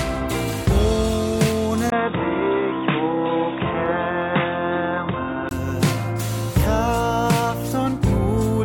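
From 1.90 s to 5.51 s the sound turns dull and boxy, with nothing above 3.8 kHz, then opens up again. A brief gap of about 20 ms marks the change, and a faint new background noise sits far below the signal while the level stays much the same. This is likely an input switched to a poorer device. The gap and the change in noise character set it apart from a simple filter or codec bandwidth drop.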